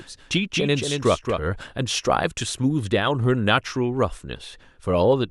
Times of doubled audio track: 0.00-1.40

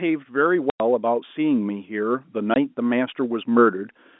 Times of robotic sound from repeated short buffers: none

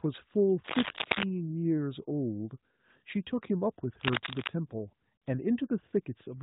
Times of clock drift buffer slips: none

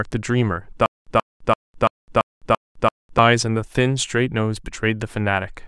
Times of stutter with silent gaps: 0.86-3.18

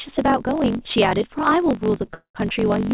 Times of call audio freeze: 2.14-2.37

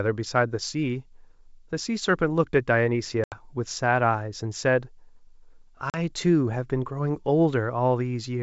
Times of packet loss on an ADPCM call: 3.24-3.44, 5.90-5.98

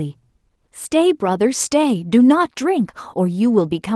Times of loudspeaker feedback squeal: none

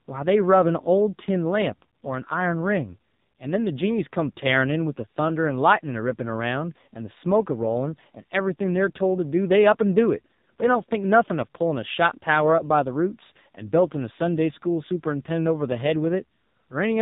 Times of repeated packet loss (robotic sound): none

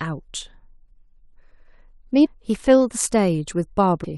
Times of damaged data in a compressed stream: 2.24-2.27, 4.03

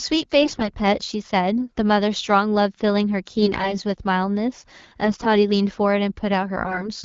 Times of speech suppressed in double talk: none

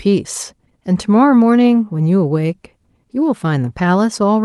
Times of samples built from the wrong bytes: none

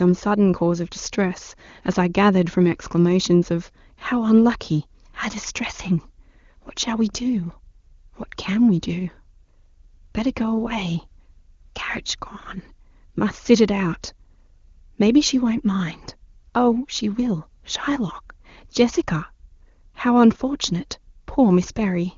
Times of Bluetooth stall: none

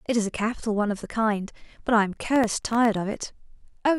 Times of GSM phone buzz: none

